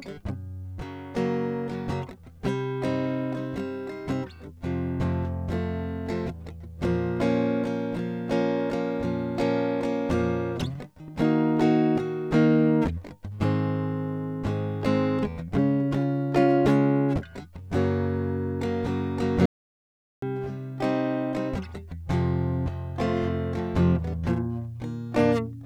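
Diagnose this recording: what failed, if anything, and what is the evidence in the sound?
The music cuts out mid-flow at 19.46 s and returns at 20.22 s, a gap of about 0.77 s of silence with no room tone or noise floor. That's an audio dropout to silence, likely the input link or device dropping while the recorder kept writing zeros.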